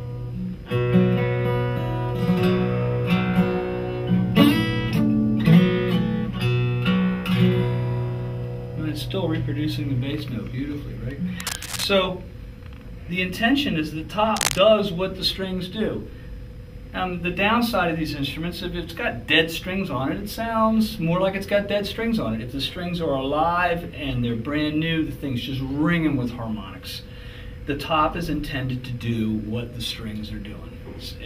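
At 11.40 to 11.84 s, a burst of cable scratch noise rustles over the sound, about 10 dB below it. A second burst follows at 14.36 to 14.59 s, roughly as loud as the sound. Both are dense and uneven. A worn cable or connector being moved is the likely cause.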